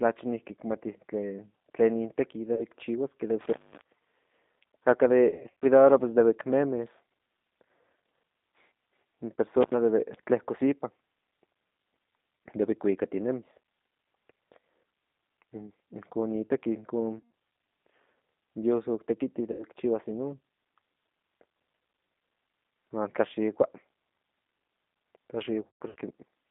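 The whole clip is coded with G.729 at 8 kbit/s. The speech sits between 200 Hz and 3.7 kHz and sounds plainly rough and synthetic.

At 2.54 s, VoIP packet loss concealed by the speech codec drops 40 ms. The decoder stretches the last sound into a brief fading tone or noise. From 3.41 to 3.81 s, an intermittent contact opens for about 209 ms, leaving faint hiss between crackles. From 5.30 to 5.66 s, scattered losses total 200 ms over 320 ms, with the longest gap 80 ms, so the speech repeatedly goes weak or distorted. At 9.61 s, the contact opens again for about 89 ms. Further concealed losses follow: 120 ms at 17.19 s, 80 ms at 19.52 s, and 220 ms scattered from 25.63 to 25.96 s, the longest run being 140 ms.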